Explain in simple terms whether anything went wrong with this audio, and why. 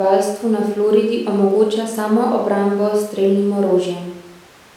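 Nothing went wrong; this speech recording has no faults.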